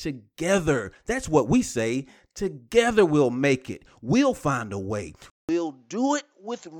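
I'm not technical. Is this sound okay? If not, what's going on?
No. At 5.3 seconds, right after "we'll find a way", the recording goes silent for about 0.19 seconds. The voice then returns duller and noticeably quieter, with a faint new background noise, and stays that way to the end. This is an input switched to a poorer device, most likely a change to another microphone or a headset in call mode. That device cuts off the crisp upper sounds, with nothing above 7.6 kHz.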